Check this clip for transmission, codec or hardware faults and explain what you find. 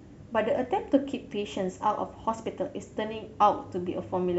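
Nothing stands out here; the speech comes across steady and intact, with no sign of trouble from the transmission path, the codec or the hardware.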